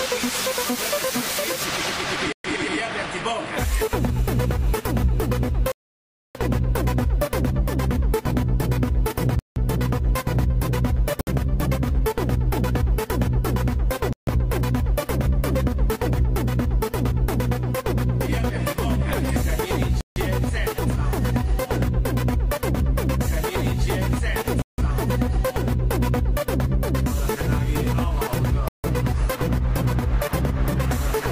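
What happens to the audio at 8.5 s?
Nothing goes wrong at 8.5 s; the audio plays through that moment intact, with no dropout, click, glitch or other fault.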